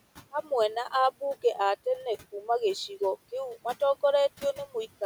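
A short speech recording carries noise suppressor artifacts from start to finish. The suppressor pulls the steady background down by about 16 dB between phrases. The residue rises under each word, then drops away. The room noise itself sits about 20 dB below the speech.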